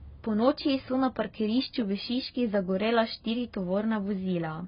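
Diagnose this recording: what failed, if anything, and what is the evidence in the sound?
The fault sits at the codec stage and runs through the whole speech clip. Nothing is heard above about 5.1 kHz. Sibilants lose their edge and turn fizzy, and sustained sounds carry a warbling, smeared texture. The cause is likely AAC compression at a low bitrate, which fits roughly 16 kbps. Starved of bits, the encoder drops its cut-off and quantises coarsely against its hearing model. It leaves gaps in the spectrum that come across as heavy damage.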